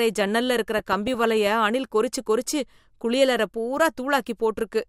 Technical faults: DAB burbling

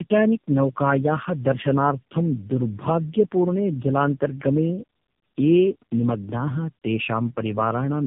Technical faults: tandem speech coding

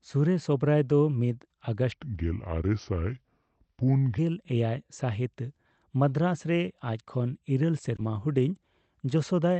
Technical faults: section at the wrong speed; short concealed packet loss

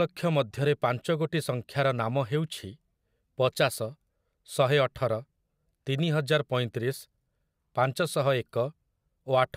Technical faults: none

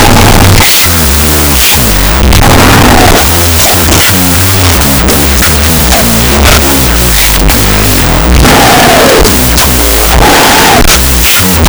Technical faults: wrong sample width

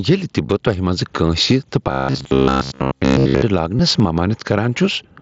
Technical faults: gain pumping; concealed Bluetooth headset packet loss; robotic sound from repeated short buffers

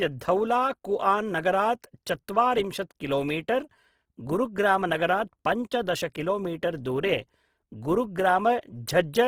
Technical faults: Opus compression

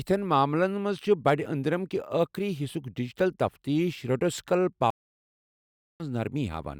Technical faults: stream reconnect

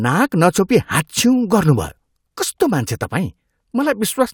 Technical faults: none

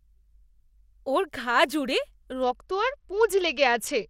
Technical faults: Bluetooth SBC bit pool drop

